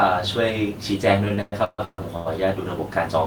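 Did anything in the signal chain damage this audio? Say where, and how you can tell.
Yes, at the network stage. Between 1.25 and 2.28 s, speech packets arrived late or too slowly, and the jitter buffer ran dry seven times. This is a repeated stall (stutter): at each stall the receiver stretched the last sound to cover the wait, about 543 ms in all, more than half of that stretch, with the longest hold near 143 ms. No speech is lost, but the passage drags, hiccups and smears instead of flowing.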